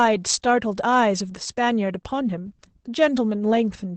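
Opus voice compression runs through the whole clip. Nothing reaches above about 8.7 kHz, so the speech sounds muffled. The linear-prediction coder renders the voice coarsely, leaving it audibly hoarse and slightly robotic. This fits a low bitrate of around 12 kbps.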